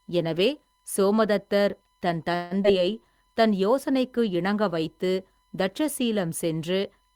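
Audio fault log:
throughout: USB whine. A faint steady tone at 1 kHz sits about 45 dB below the speech, fixed in pitch and independent of the talker. It is interference from the 1 ms USB frame rate leaking through power or ground, not acoustic noise in the room.
2.35–2.53 s: call audio freeze. Right after "எனவே சோமதத்தர் தன்" the last sound is held as a fading buzz or hiss for about 155 ms, with no silence and nothing lost. Speech then resumes where it stopped. The likely cause is delayed packets emptying the jitter buffer. Unlike a skip, nothing is missing; time has been inserted instead.
2.63–2.66 s: skip ahead. Shortly after the freeze, playback jumps forward, dropping about 70 ms of speech. The two sides are joined by only a 12 ms splice. Unlike the freeze just before it, nothing is stretched or held; sound is simply removed and the edges meet abruptly.
2.79–3.41 s: jitter buffer slow-down. 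Between "எனவே சோமதத்தர் தன்" and "தன் யோசனைக்கு இணங்க" the speech runs at about 93% speed, adding 49 ms through repeated pitch periods. Pitch stays the same while sounds drag, which separates it from a tape-like slowdown that would lower pitch.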